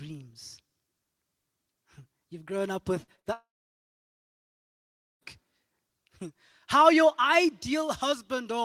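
Just after "grown up with", short concealed packet loss appears at 3.03 to 3.10 s and again at 3.16 to 3.20 s: about 40 ms and 20 ms of audio never arrived, and the receiver extended the preceding sound to bridge each hole, leaving a brief smear or wobble.

Directly after, a burst of packet loss runs from 3.20 to 3.27 s. Roughly 60 ms went missing in succession, so the receiver held and faded the last sound into a short buzz or hiss before the audio picks up further along.

From 3.33 to 5.23 s a long network dropout likely occurred. The last sound is carried on briefly and fades, then about 1.76 s of silence follows. The audio returns later, with nearly 1.9 s of the speech lost.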